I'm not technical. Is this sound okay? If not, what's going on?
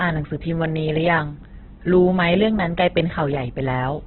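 No. Opus compression runs through the whole clip: the speech sounds muffled, rough and grainy from start to finish. This is likely from saving or sending the audio with the Opus format squeezed extremely hard. To fit so little data, the encoder keeps only the rough loudness of each frequency region and fills in detail with noise or copied material. It also discarded everything above 4.2 kHz, which removes crispness and leaves that dull, telephone-like quality.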